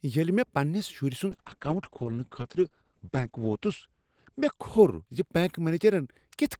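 At 1.32 s a call bitrate drop sets in and lasts to the end of the clip. The connection's bandwidth estimate collapsed, and the encoder was pushed from 64 kbps down to 9 kbps, holding the lowest rate for about 2.07 s. With so few bits, the speech is quantised coarsely and turns rough and watery, while the coded bandwidth shrinks from 20 kHz to 8 kHz, leaving the top end muffled.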